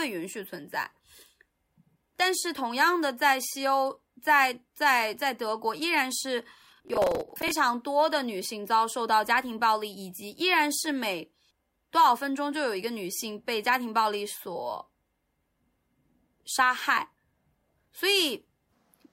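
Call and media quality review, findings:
Processor overload crackle, 6.61 to 7.51 s: gritty tearing on the speech, with a long run of missed deadlines on roughly 10 ms buffers, each one replaying stale audio with hard edges. Likely CPU load on the audio thread.

Same processor overload crackle, 17.60 to 17.88 s: a shorter burst of crackle from the same mechanism, fewer missed buffers, and it stops once the load eases.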